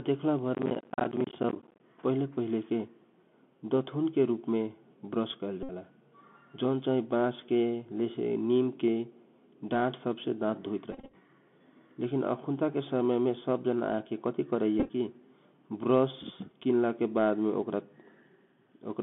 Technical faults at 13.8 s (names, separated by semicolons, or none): Bluetooth CVSD headset codec